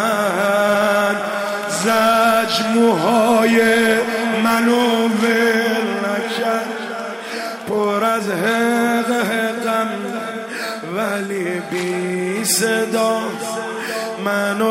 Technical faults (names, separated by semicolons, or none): none